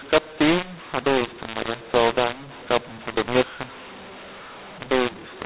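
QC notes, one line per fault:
Throughout, mu-law and A-law mixed up: the speech was coded with A-law but decoded as mu-law, so each 8-bit code maps to the wrong level on the logarithmic scale. Loudness comes out scrambled, giving harsh, distorted speech, and near-silent samples are lifted so pauses fill with noise.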